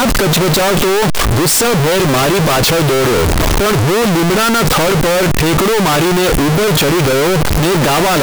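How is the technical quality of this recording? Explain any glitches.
The technical quality is poor. Throughout, float read as integer makes the speech blaringly loud and harsh, with background noise as loud as the talking, though pitch survives. The likely cause is 32-bit float samples read as 32-bit integers, so sign and exponent bits dominate. The waveform shows a near-square block at a nearly fixed high level; the spectrogram shows dense broadband energy.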